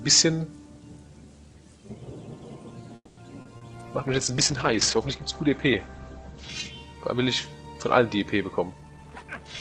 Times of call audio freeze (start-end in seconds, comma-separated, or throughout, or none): 2.95-3.20